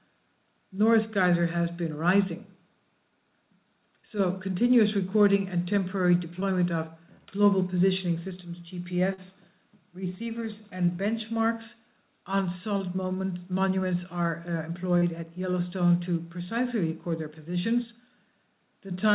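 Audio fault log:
6.40–6.44, 9.14–9.20, 10.86–10.90, 12.78–12.82 and 14.98–15.04 s: short concealed packet loss. Gaps of about 20 to 40 ms never arrived in time. The receiver extended the preceding sound, then blended back. Each one heard as a brief smear or wobble against the narrowband, 4 kHz-limited call sound.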